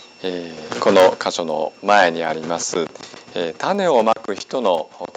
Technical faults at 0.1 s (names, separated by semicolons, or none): resampler restarted on every block